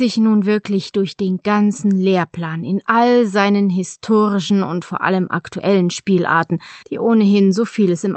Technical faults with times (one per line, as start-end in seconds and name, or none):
none